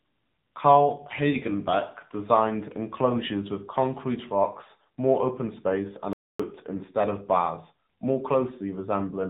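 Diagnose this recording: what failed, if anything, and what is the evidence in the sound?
AMR narrowband mobile codec damage, present from start to end: the speech has nothing above 4 kHz and a buzzy, synthetic edge. This is a codec-stage fault. The vocal-tract model with sparse pulse excitation, running at about 8 kbps (consistent with the 7.95 kbps mode), discards detail and band-limits the signal.

Playback stall at 6.13 to 6.40 s: after "more open space and", the output drops to silence for about 0.26 s, then resumes with "instead of bars more". This points to the playback stage, likely a player buffer running dry or a blocked output thread.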